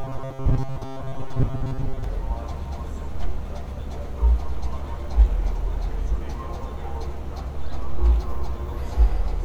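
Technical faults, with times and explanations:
0.01 to 2.04 s, robotic sound from repeated short buffers. The sound becomes a rigid metallic buzz at 134 Hz. A tiny chunk of audio, about 7.5 ms long, is likely being replayed in place of most of the real signal.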